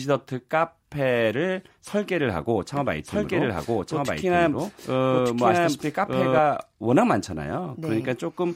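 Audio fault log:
2.77 to 6.39 s, doubled audio track: a second, slower capture path or an out-of-step edit has likely mixed the speech in twice, so a dry copy about as loud as the original trails roughly a second behind, starting and stopping abruptly.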